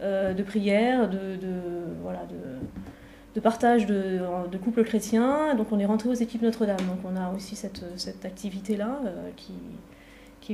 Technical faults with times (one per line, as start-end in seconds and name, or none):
none